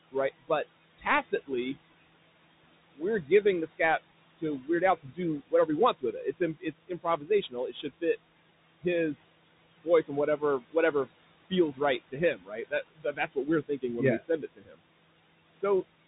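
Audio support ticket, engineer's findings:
Noise suppressor artifacts throughout: background pulled down about 19 dB between phrases, pumping back up under speech. Per-frame band gating on the room noise, which sits about 16 dB below speech.

Bluetooth CVSD headset codec throughout: nothing above 3.8 kHz, scratchy sibilants, grainy hiss under speech. Consistent with 64 kbps CVSD, where the one-bit delta step can't keep up with loud high content.

Speech cut by the noise suppressor at 0.98–1.76 s, 2.96–3.8 s, 4.37–8.03 s, 9.84–11.07 s, 11.5–13.83 s (up to "when yeah we"), and 14.18–14.8 s (right after "when yeah we"). Soft consonants and word ends get swallowed, with drops of about 12 dB early, deepening to about 21 dB late. The suppressor is misreading quiet speech as noise, and it's worst in the 4.37–8.03 s stretch.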